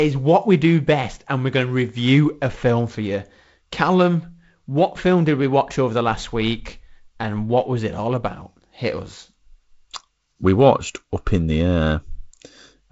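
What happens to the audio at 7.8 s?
At 7.8 s the speech is intact, carried through G.722 wideband telephone coding with nothing above about 7.7 kHz, a light upper-band hiss and the slightly noisier lower band that coding leaves at 48 kbit/s.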